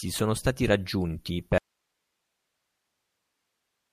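At 1.58 s, right after "sono stati raggiunti", the speech cuts off abruptly in an audio dropout to a faint residue. The signal was likely lost while the path stayed live. Only hiss remains, far below the speech, roughly 55 dB down, through the end. The waveform collapses to a thin flat band, and the spectrogram shows a uniform grey noise floor.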